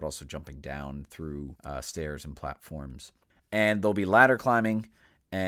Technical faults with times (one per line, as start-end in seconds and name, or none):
none